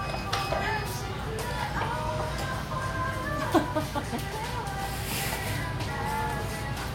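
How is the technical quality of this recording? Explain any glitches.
No glitches can be heard anywhere in this recording.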